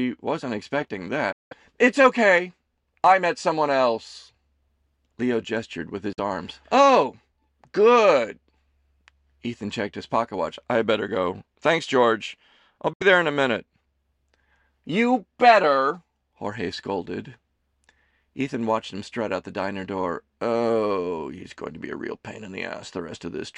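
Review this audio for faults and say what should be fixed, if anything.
Speech drops to silence at 1.32 s after "wasn't expecting", at 6.13 s after "gestured with", and at 12.93 s before "there in a minute". The gaps last 0.19, 0.05 and 0.07 s. Each time, the speech resumes further on, as if it had kept playing. This is likely a Bluetooth dropout, with packets arriving too late and being thrown away. Keep the source close to the headphones and clear of radio interference.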